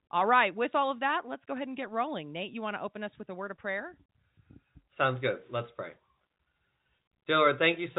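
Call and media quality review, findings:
No faults found; the speech carries the band-limited sound of G.711 telephone coding, with nothing above about 3.8 kHz and only the faint, level-following quantisation noise that a 64 kbps mu-law telephone path produces.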